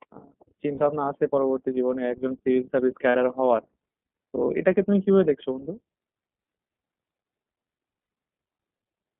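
The whole speech clip passes through the iLBC codec. The band is narrow, roughly 200 Hz to 3.4 kHz, so nothing bright survives above it. Each frame's excitation is coded on its own, and the damage is plainly audible. Speech sounds slightly rough and synthetic. The texture fits 30 ms frames at 13.33 kbps.

Lost iLBC frames follow. The first is at 0.75 to 0.82 s, lasting 60 ms. The second is at 3.09 to 3.15 s, again 60 ms. The third is at 8.0 to 8.09 s, lasting 90 ms. The first two fit two missing 30 ms frames, and the last fits three. In each gap the decoder repeats the last pitch cycle, mixed with noise. It sounds like a short, held, buzzy vowel. Clear speech returns almost at once afterwards.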